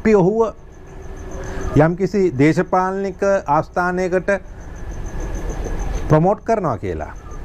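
No technical faults are audible.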